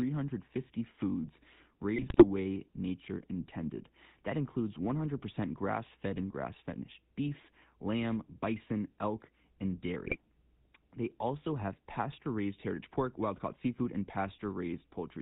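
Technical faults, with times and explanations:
Throughout: GSM full-rate codec. The whole clip has the buzzy, gravelly roughness of the original GSM coder, whose sound points to a rate near 13 kbps. It rebuilds the speech from a vocal-tract filter fed by a regular pulse train carrying only every third excitation sample, and nothing above 4 kHz survives. The damage is plainly audible. Unlike bit errors, this is a steady texture over the whole clip, with no sudden breaks.
1.96 to 2.24 s: GSM bit errors. Just before "way nature intended" the speech breaks into squawks and gargling for under a third of a second, a burst that fits roughly a dozen corrupted frames. Flipped bits, at a rate near 3%, scrambled the decoder's filter, pitch and gain values, so the spectrum bends and the level jumps frame by frame. That separates it from the constant codec buzz.
10.02 to 10.16 s: GSM bit errors. Right after "lamb bison elk and" a shorter burst of the same squawking and popping is heard, about 0.14 s long, which suggests roughly half a dozen damaged frames at an error rate near 2.5%. 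Corrupted parameters again distort the spectrum and loudness frame by frame.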